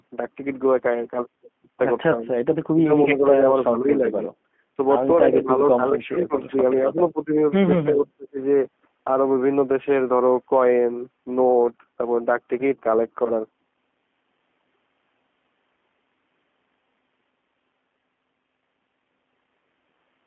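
Throughout, the speech sounds rough and slightly synthetic, confined to roughly 200 Hz to 3.4 kHz. That is G.729 codec damage: a narrowband coder at what fits 8 kbit/s rebuilds each frame from a vocal tract filter, a pitch predictor and a few pulses.

From 5.3 to 6.33 s the speech sinks by about 15 dB, for about 0.7 s in total. This is likely speech suppressed in double talk, where an echo canceller heard both ends at once and ducked the near talker with the echo.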